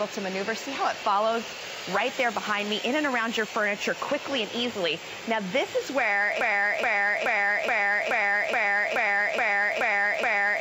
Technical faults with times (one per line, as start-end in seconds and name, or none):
6.41-10.60 broken-record loop